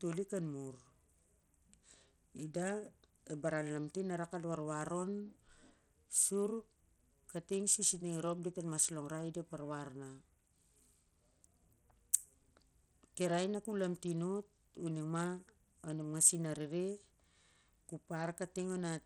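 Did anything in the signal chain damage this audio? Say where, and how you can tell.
Yes. Throughout the speech the treble flickers in and out and a gritty, grainy noise rides on it, the signature of Bluetooth SBC compression, likely at a low setting near 80 kbps. On a spectrogram the upper sub-bands show ragged, blocky gaps and speckled quantisation noise.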